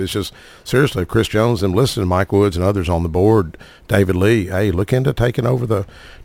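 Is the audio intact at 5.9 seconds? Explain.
No. At 5.9 seconds the speech carries a crude rate conversion fault that runs through the entire clip. The samples appear to have been repeated to stretch the rate by about 48/44.1, which fits a 44.1 kHz to 48 kHz conversion done without filtering. This leaves an inharmonic, gritty fizz around 30 dB below the speech that rides on louder and brighter sounds. On a waveform, tiny stair-step repeats appear. A spectrogram shows faint mirrored partials.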